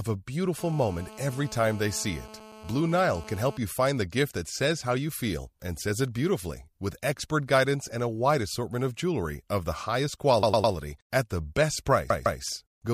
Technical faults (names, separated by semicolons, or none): GSM phone buzz; repeated frames